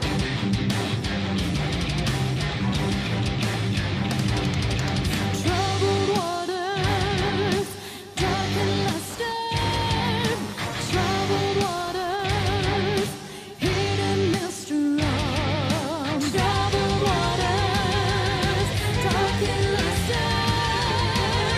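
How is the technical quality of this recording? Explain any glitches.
The recording has one glitch, a burst of computer activity noise from 9.10 to 12.60 s. For those three and a half seconds a buzzing, chirping or scratching layer pulsing at roughly 150 Hz sits about 15 dB below the wanted sound. It comes from the computer's changing load on its processor, graphics card or mouse disturbing the ground that the audio circuit shares. It differs from steady mains hum because it jumps in and drops out with the machine's activity rather than staying constant or following the sound.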